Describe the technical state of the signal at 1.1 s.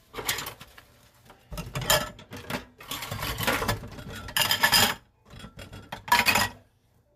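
At 1.1 s the audio is intact, with no dropout, clipping, distortion or other fault to be heard.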